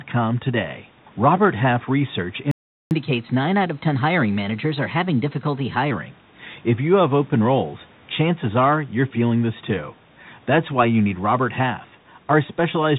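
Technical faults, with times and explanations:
Throughout: Bluetooth CVSD headset codec. The speech is squeezed into the narrowband headset path, with nothing above 4 kHz, and its one-bit delta coding at 64 kHz cannot follow fast, loud rises, so sibilants turn scratchy and a granular hiss sits beneath the speech.
2.51 to 2.91 s: playback stall. The audio cuts out mid-flow for about 0.4 s, most likely because the player ran dry of data or its thread was held up, leaving silence until output resumed.
2.91 to 5.91 s: catch-up at higher speed. Right after the gap the speech runs 1.1 times fast for three seconds, with pitch lifted by roughly a semitone and a half, as the backlog is resampled to recover lost time.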